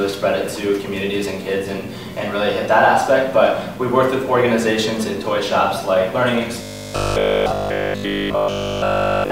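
Audio arriving too seldom, likely starved of fresh buffers, leaves the playback side looping the last short chunk from 6.62 s to 9.30 s, with essentially everything in that stretch a repeat. This produces robotic sound from repeated short buffers: a rigid, metallic 50 Hz buzz, which fits a 20 ms chunk cycling over and over.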